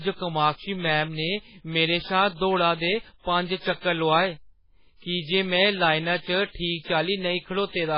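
Dull, band-limited speech runs the whole way through, with nothing above about 5.2 kHz, so the s sounds lose their hiss and the voice sits behind a muffled, watery haze that swirls as weak spectral detail flickers in and out from frame to frame. The damage is heavy and points to MP3 compression at a very low bitrate, around 16 kbps. The likely cause is an encoder starved of bits, cutting the treble at a fixed point and zeroing quiet frequency lines.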